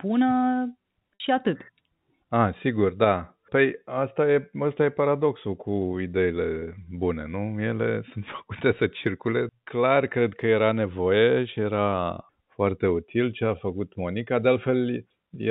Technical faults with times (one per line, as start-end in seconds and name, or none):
1.16-1.20 packet loss with pitch repetition
6.60-6.62 packet loss with pitch repetition